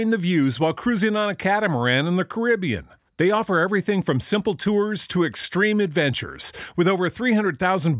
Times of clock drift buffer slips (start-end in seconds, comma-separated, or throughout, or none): none